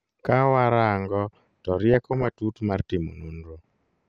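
Throughout, the speech sounds dull and granular, with upper bands flickering away. This is likely MP2 compression short of bits, fitting a rate near 80 kbps.

DAB burbling hits from 1.93 to 2.28 s, just after "rango to", and again from 3.59 to 3.64 s. Bit errors jolt single sub-bands, giving short blips of noise.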